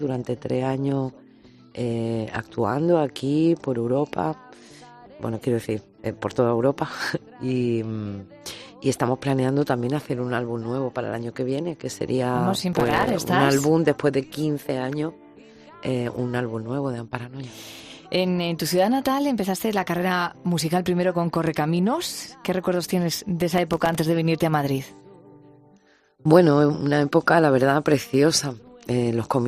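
The audio has two bursts of processor overload crackle, from 12.73 to 13.09 s and from 23.41 to 23.95 s. Each sounds like a gritty tearing laid over the sound. The processor could not finish its audio buffers in time, missing many deadlines in a row. Each missed buffer dropped out to silence, leaving a tiny hard-edged gap. The rapid texture fits very short buffers, around a millisecond and a half. The crackle stops once the load passes.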